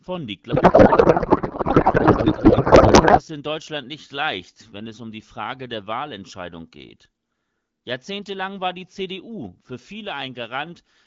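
From 0.51 s to 3.22 s the speech turns into garbled noise and warble that barely tracks the talker, which is a codec payload misread. The decoder is pulling fields from the wrong bit positions, most likely because octet-aligned AMR packing is being read as bandwidth-efficient, so each frame decodes as plausible but wrong. Before and after that stretch you can hear the AMR wideband (HD Voice) codec with only light coding damage, which fits a rate around 12.65 kbit/s.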